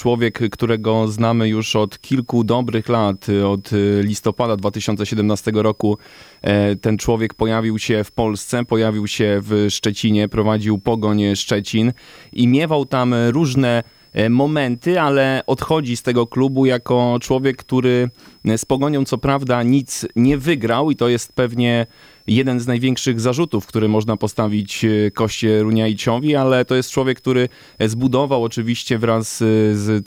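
Speech runs under a switching supply whistle for the whole clip: a faint high tone near 5 kHz, roughly 35 dB below the speech, wandering between about 4.97 and 5.31 kHz as the supply's load shifts. That drifting pitch sets it apart from steady mains hum.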